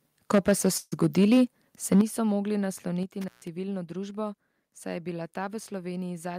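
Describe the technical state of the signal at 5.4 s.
At 5.4 s the speech signal is intact, with no audible technical fault at that moment.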